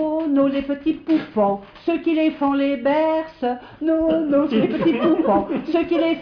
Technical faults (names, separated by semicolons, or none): none